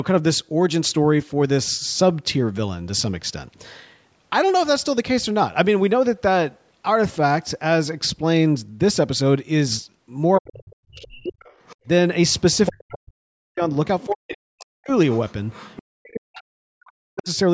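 From 10.38 to 11.89 s the speech dips and breaks up, falling by up to about 40 dB for roughly a second in total. This is speech suppressed in double talk, likely because the echo canceller turned the talker down along with the far-end echo. From 11.39 to 11.76 s a faint second voice, about 30 dB under the speech, comes through: the other side's voice leaking through, likely from the loudspeaker. It returns more strongly from 12.4 to 12.91 s, only about 10 dB below. The speech is suppressed again from 12.69 to 14.91 s, for about two seconds in all. The other voice leaks from 14.02 to 15.83 s at about 20 dB down. A final suppression runs from 15.84 to 17.29 s and affects about a second and a half of speech.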